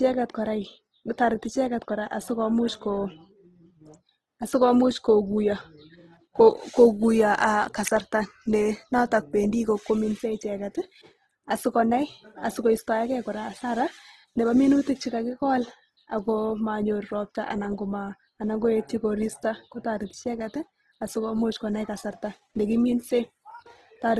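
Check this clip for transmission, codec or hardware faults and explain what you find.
One codec fault runs through the whole clip.

Throughout, likely Opus compression in music mode, consistent with about 16 kbps, fills bit-starved bands with noise; speech sounds rough and grainy, with nothing above 12.4 kHz.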